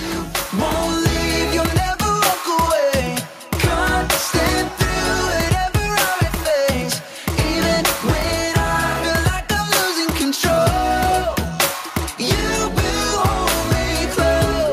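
Nothing stood out on listening; no technical fault could be heard anywhere in the audio.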